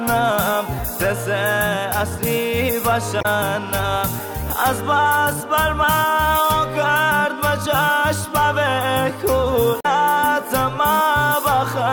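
A brief glitch cuts into the sound at 3.18 s for about 70 ms and again at 9.79 s for about 60 ms. Both come from damaged data in a compressed stream: corrupted bytes leave the decoder misreading frames until it regains sync.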